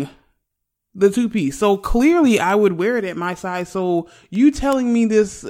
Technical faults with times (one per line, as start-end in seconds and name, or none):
0.27-5.47 word clock ticks